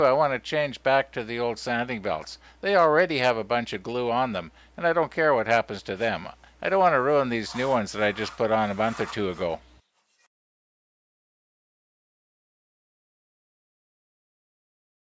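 Nothing here goes wrong: the audio just carries the ordinary mark of a call's microphone processing, with the lowest bass trimmed away and nothing above 8 kHz, which is how that path normally sounds.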